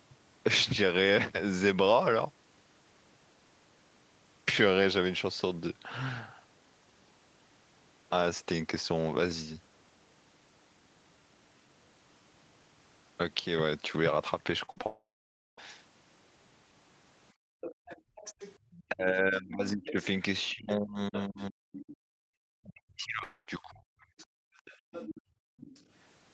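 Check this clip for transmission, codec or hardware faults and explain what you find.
The speech in this clip has five kinds of call-path fault, grouped between about 14.65 s and 25.82 s. Throughout, the sound is band-limited to 8 kHz, as expected from an Opus call link.

Repeated packet loss (robotic sound), 14.65 to 14.84 s: the speech turns choppy. Four short holes, the longest 42 ms, each get patched by stretching the previous sound, so concealment fills roughly half of this brief span.

Long network dropout, 14.86 to 15.59 s and 23.23 to 23.48 s: the sound smears into a fading buzz, then goes silent for about 0.54 s in the first case and only briefly in the second. Audio resumes with that stretch missing, likely because packets stopped arriving.

Background gated by the echo canceller, 17.33 to 18.61 s, 22.12 to 22.36 s and 24.14 to 25.58 s: the room tone suddenly drops by about 40 dB and then returns. 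The canceller clamps the microphone while the loudspeaker plays.

Other side's voice leaking through, 17.61 to 18.83 s, 19.85 to 21.96 s and 24.03 to 25.82 s: a second voice sits roughly 15 dB under the talker. This is likely loudspeaker sound that the echo canceller failed to fully remove.

Speech suppressed in double talk, 18.89 to 23.86 s: the talker's voice repeatedly dips, dulls or cuts out, by up to around 40 dB, for about three seconds in total. This is likely the canceller muting both sides when they overlap.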